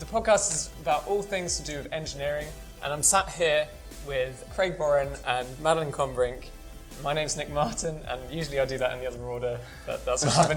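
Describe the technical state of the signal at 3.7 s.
At 3.7 s the signal is inside a call bitrate drop running from 2.03 s to 4.99 s, when the encoder's rate falls from 128 kbps to 28 kbps and stays at its lowest for 1.39 s. With so few bits, the coding turns coarse and the upper frequencies are discarded, so the sound goes muffled and watery. On a spectrogram the high band is abruptly empty and the remaining detail looks smeared, while the waveform's outline barely changes.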